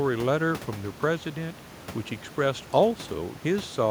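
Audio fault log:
The speech signal shows no technical faults, with only a low room noise floor sitting about 20 dB below the voice as part of the recording environment.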